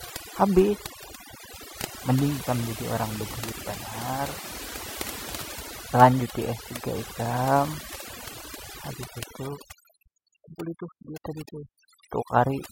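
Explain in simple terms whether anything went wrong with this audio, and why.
Overdone noise removal runs through the whole clip. A noise-cleaning tool was set too strong, muting any frequency band close to the background hiss, including quieter parts of the speech. The background drops and breaks up into twinkling specks.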